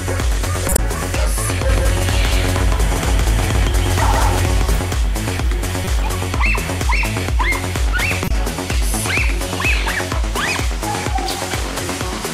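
Damaged compressed frames reach the decoder and are played regardless: from 0.69 to 0.79 s a few misread frames throw energy to the wrong frequencies, heard as a chirp, squeak, blip or burst of noise of corrupt frame decoded peaking around -5 dBFS. From 1.69 to 4.79 s, a doubled audio track, likely from a second, slower capture path, adds a full-band copy about 150 ms late and roughly equally loud, with no decay, starting and stopping abruptly. Shorter corrupt frame bursts return at 5.84 to 5.88 s and, quieter near -10 dBFS, at 8.24 to 8.31 s.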